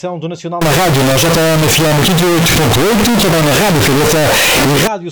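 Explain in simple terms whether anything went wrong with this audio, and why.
Float read as integer, from 0.61 to 4.87 s: the sound suddenly becomes extremely loud, harsh and buzzy, and background hiss is as loud as everything else. The likely cause is that 32-bit floating-point samples were read as 32-bit whole numbers. Each sample's level is then set by its sign and exponent bits instead of its true value, which flattens the waveform into near-square blocks at an almost fixed, high level.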